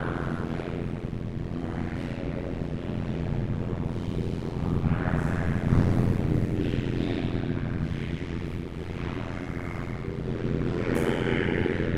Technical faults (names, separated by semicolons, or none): overlap-add ripple